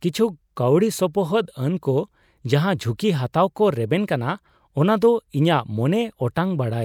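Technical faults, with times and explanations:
No technical faults can be heard in this speech.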